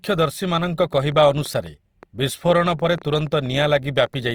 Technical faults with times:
0.00-4.34 Opus compression
0.93-4.15 train of clicks

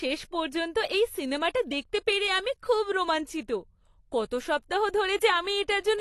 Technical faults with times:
0.00-6.01 AAC compression

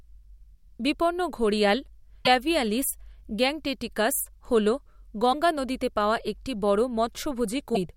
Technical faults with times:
2.25-2.27 broken MP3 bit reservoir
5.32-5.34 broken MP3 bit reservoir
7.74-7.77 broken MP3 bit reservoir

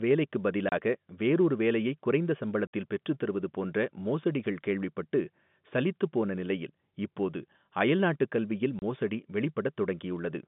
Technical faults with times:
0.69-0.72 packet loss filled with silence
2.67-2.71 packet loss filled with silence
8.79-8.82 packet loss filled with silence

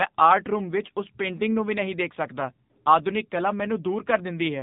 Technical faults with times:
0.00-4.62 AMR narrowband mobile codec

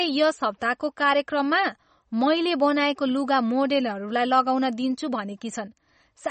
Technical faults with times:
0.00-6.30 MP3 compression

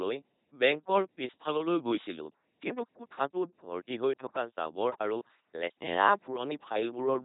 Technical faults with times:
0.00-7.24 LPC-10 vocoder

